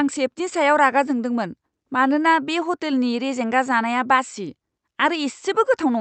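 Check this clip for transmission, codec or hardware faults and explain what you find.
I found no faults to report in this clip.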